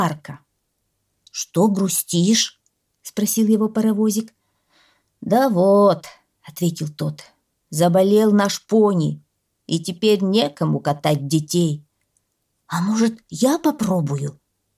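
Nothing goes wrong anywhere in this audio; there are no technical faults to point out.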